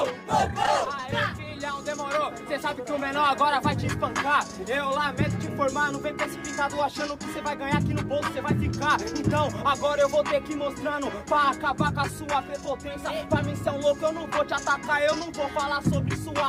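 From 0.63 to 1.13 s there is repeated packet loss, producing a robotic sound. Several short dropouts, the longest about 12 ms, are concealed by extending the preceding sound, roughly 45 ms in total. The result is a choppy, robotic stutter across that half-second.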